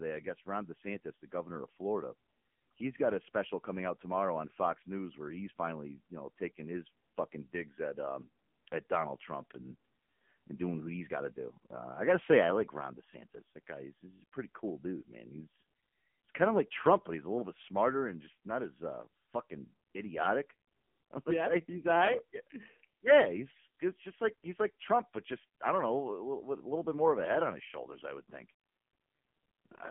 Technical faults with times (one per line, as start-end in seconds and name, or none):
0.00-29.91 AMR narrowband mobile codec